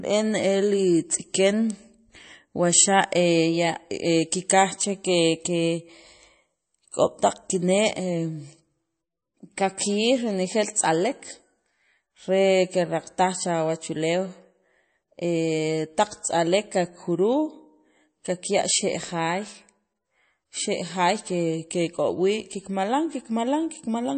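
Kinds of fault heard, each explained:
MP3 compression: The speech sounds watery and swirly throughout, with a dull top end because nothing is heard above 8.4 kHz. This is likely MP3 encoding at a low bitrate, consistent with roughly 33 kbps. With so few bits, the encoder drops all treble above a fixed cutoff and zeroes quieter frequency lines. Those lines switch on and off from frame to frame, producing the unstable, swirling texture heard across the whole clip.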